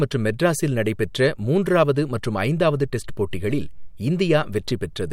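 There are no technical faults to describe, at any point in the recording.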